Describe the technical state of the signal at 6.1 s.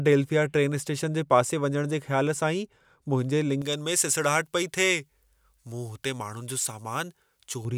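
At 6.1 s the speech sits inside a stretch of pre-emphasis left on, running from 3.62 to 7.65 s. The treble lift applied before recording or transmission was never undone, so 10 kHz stands about 11 dB above 1 kHz, which fits a J.17 curve, leaving the speech thin, bright and hissy on sibilants.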